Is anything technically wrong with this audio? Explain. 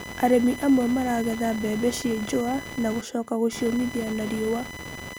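Yes. Computer activity noise runs throughout the clip. Changing load from the processor, graphics card or mouse shifts the ground that the audio circuit shares with the computer, so those current swings leak into the signal. Here it shows up as a buzzy, chirping interference pulsing at around 1 kHz, sitting roughly 15 dB below the speech. Its texture rises and falls with the machine's activity rather than following the talking.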